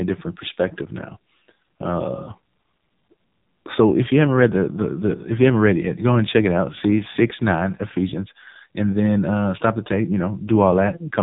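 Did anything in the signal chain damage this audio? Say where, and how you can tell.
Yes. Throughout, the speech carries AMR narrowband mobile codec damage at the codec stage: a hard ceiling at 3.8 kHz shows as an empty spectrogram above it, and the heavy buzzy, synthetic texture fits roughly 5.9 kbps, with too few pulses in each 5 ms to drive its vocal-tract model.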